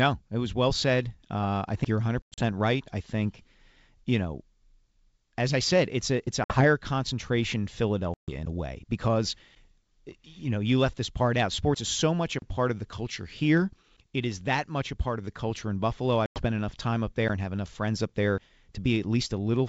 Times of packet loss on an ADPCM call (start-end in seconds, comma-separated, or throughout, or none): 2.22-2.42, 6.44-6.65, 8.14-8.33, 16.26-16.42